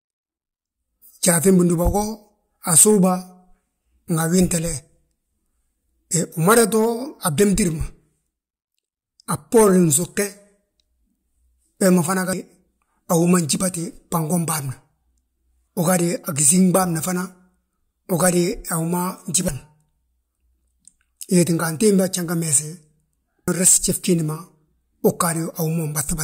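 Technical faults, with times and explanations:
12.33 s (just after "we ma fana"), 15.68 s, 19.48 s and 23.48 s, compressed frames skipped: roughly 0.2, 0.1, 0.3 and 0.2 s of speech vanish, whole frames dropped, fitting frames of about 93 ms.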